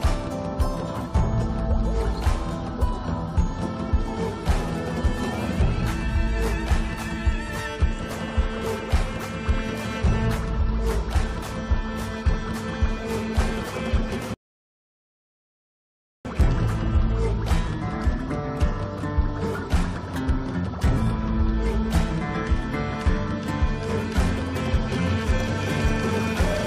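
At 14.34 s a rebuffering stall drops to silence until 16.25 s, then resumes exactly where it stopped. Unlike a dropout, nothing is skipped; 1.91 s is simply added.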